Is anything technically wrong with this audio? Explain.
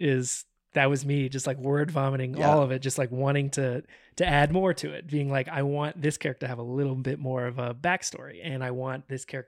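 Yes. At 7.48 s there are dropped samples: the stream likely lost a couple of samples, far less than a millisecond, so the waveform jumps abruptly to a later value. That step produces one sharp click in the speech, too brief to remove any sound.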